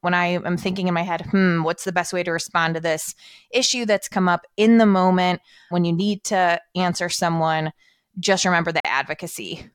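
A Bluetooth stall occurs from 8.80 to 8.85 s, just after "to answer someone just": the speech cuts to about 46 ms of silence, then resumes. The likely cause is wireless interference delaying packets so the headphone buffer emptied and playback paused until retransmitted data arrived.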